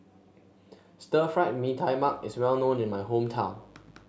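Mains buzz enters this speech clip at 1.96 s and continues to the end. Sharp switching spikes twice per 50 Hz cycle spread raspy harmonics upward, sitting about 30 dB below the speech.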